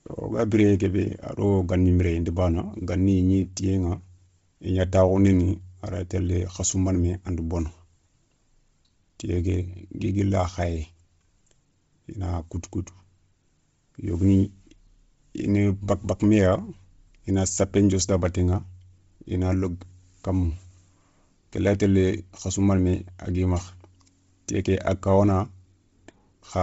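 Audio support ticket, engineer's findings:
Speech breathy and grainy throughout, upper band hissy rather than clear; nothing above 7.7 kHz. Likely Bluetooth LC3 compression: heavy damage consistent with a 24 kbps setting and 7.5 ms frames, upper spectrum zeroed and refilled with noise.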